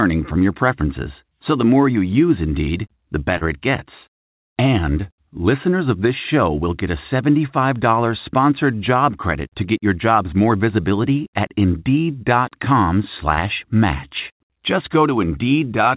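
Short concealed packet loss hits this speech at 3.38 to 3.44 s, just before "it gets", and again at 13.34 to 13.40 s. Each time about 30 ms of audio arrived too late, and the receiver bridged the gap by extending the preceding sound before blending back, leaving a brief smear. The speech comes over a call path whose band stops at 4 kHz, which fits G.711 coding.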